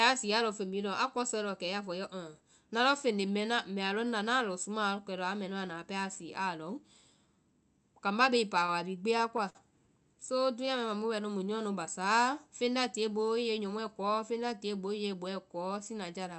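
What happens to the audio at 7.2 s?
Nothing goes wrong at 7.2 s: the speech passes through the call path there with no dropout, glitch or other fault.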